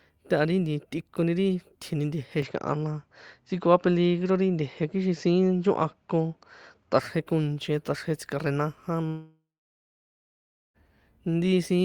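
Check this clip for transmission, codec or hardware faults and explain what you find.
Two faults are audible in this speech clip.

Input switched to a poorer device, 2.42 to 6.99 s: likely a change of microphone. With no gap or level jump, the sound dulls, with nothing above 7.6 kHz and a faint new noise floor.

Long network dropout, 9.07 to 10.77 s: likely lost packets. The receiver stretches the last sound into a fading buzz, then about 1.3 s of silence before audio resumes, missing the lost part.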